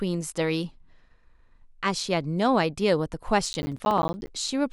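From 3.46 s to 4.28 s the speech picks up a gritty, tearing crackle, a rapid run of tiny dropouts to silence with hard edges that chop through the sound until it clears just before the end. This is processor overload crackle: the processor fell behind and missed a string of buffer deadlines, each one leaving a brief hole. The spacing fits buffers of around 10 ms, with something like twenty of them lost across the burst.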